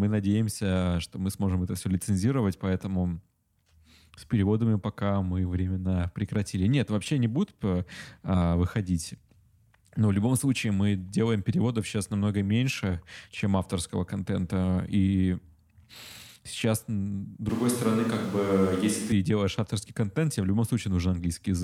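The close microphone's signal likely drops out from 17.49 to 19.12 s, leaving a switch to a distant microphone. The speech turns suddenly roomy and hollow, thinner in the bass, with room noise roughly 25 dB below it at an unchanged level, snapping back before "делаешь авторский контент тебе".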